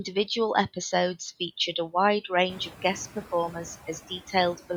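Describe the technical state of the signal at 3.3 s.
At 3.3 s the clip is under noise suppressor artifacts, present from start to end. The suppressor judges which bands hold steady noise in each short frame and pulls them down by about 8 dB, so the room noise, which has risen by about 14 dB from around two and a half seconds and now sits about 19 dB below the speech, dips between words and swells back beneath them. A noise gate would instead cut the whole signal on and off; here the noise only thins unevenly by frequency and never drops to silence.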